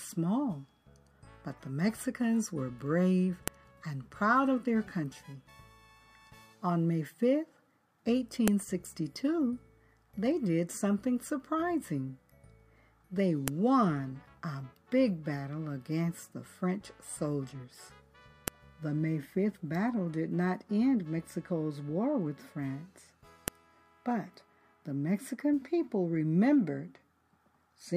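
A file header played as audio produces sharp, loud clicks at 3.48, 8.48, 13.48, 18.48 and 23.48 s, exactly 5 s apart. The regular spacing points to the audio being assembled from 5-second WAV pieces that were joined or streamed with their headers left in place. Each header's few dozen bytes are read as sample values, so a brief snap lands at every piece boundary regardless of what the surrounding sound is doing.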